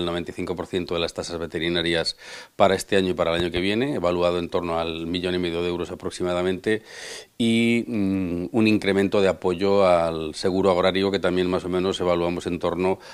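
A loud pop lands between 3.40 and 3.60 s: two sharp bursts in quick succession, peaking roughly 10 dB above the surrounding sound, which carries on unbroken beneath them. The likely cause is a sudden voltage step or spike entering the signal path, as from a connector being disturbed, a switch, a static discharge or a driver glitch. The downstream circuitry shaped that step into a brief, percussive thump.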